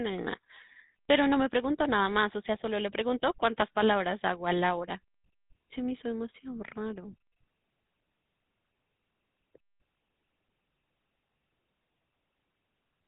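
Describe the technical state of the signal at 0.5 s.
GSM full-rate codec damage at 0.5 s, present throughout: pulse-driven vocal-tract modelling, consistent with 13 kbps, gives speech a buzzy, gravelly roughness, with nothing above 3.8 kHz.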